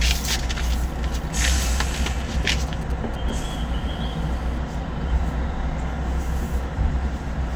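From 1.96 to 3.39 s there are GSM signalling bursts. A 2G phone nearby is sending short groups of radio pulses. The audio circuit rectifies them into a galloping dit-dit-dit of brief 217 Hz buzzes. They sit roughly 20 dB below the sound.

From 3.50 to 4.58 s a steady GSM phone buzz follows, as the phone is now in a call. Its transmitter pulses 217 times a second, and the circuit rectifies each pulse. The result is a hard, raspy 217 Hz buzz with many harmonics, about 28 dB below the sound.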